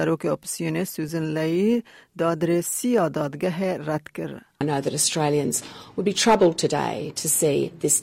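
Nothing in the audio stood out as a technical fault on listening.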